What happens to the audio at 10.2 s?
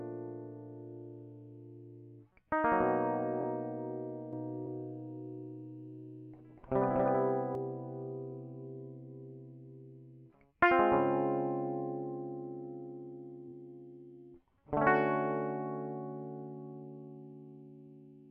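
Nothing goes wrong at 10.2 s: the music plays through that moment intact, with no dropout, click, glitch or other fault to be heard.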